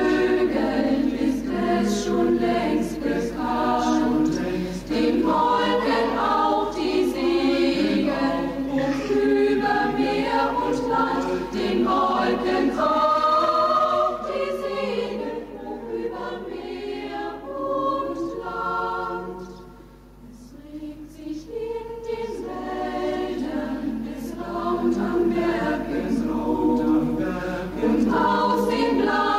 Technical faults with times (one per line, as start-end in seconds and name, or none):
0.00-29.39 gain pumping